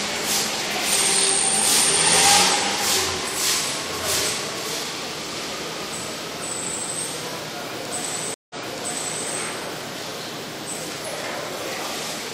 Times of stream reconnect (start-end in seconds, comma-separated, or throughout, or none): 8.34-9.27